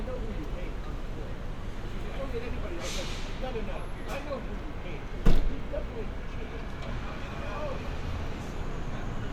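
Listening to the recording, nothing stood out as a technical problem at any point.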